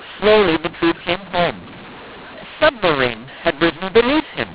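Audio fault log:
Throughout, mu-law and A-law mixed up: the speech was coded with G.711 A-law but decoded as mu-law, so every 8-bit code word maps to the wrong level on the wrong logarithmic curve. Sample magnitudes come out scrambled, some too loud and some too soft, giving a harsh, gritty distortion over the whole telephone-band speech. The smallest codes decode well above zero, so pauses fill with a steady hiss instead of falling silent.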